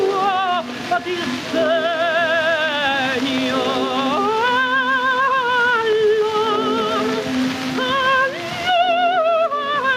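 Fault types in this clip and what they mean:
Gain pumping: the gain keeps being pulled down on loud sounds, a swing of roughly 15 dB that runs through the whole clip, so loud and quiet passages end up squashed close together in level. The likely cause is a fast limiter or compressor clamping down on input gain set far too high.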